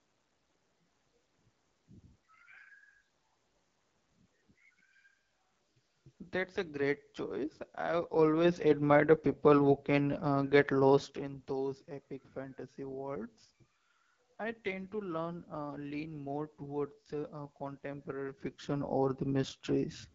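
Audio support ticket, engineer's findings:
AMR wideband (HD Voice) codec, whole clip: rough, raspy speech texture and nothing above 7.5 kHz. The pulse-driven vocal tract model is starved at a low rate, which fits one of the lowest modes, about 8.85 kbit/s. The band reaching about 7 kHz and the raspiness rule out narrowband AMR and a plain low-pass filter.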